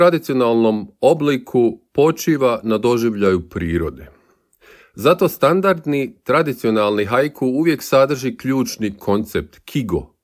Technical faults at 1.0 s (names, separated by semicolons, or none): none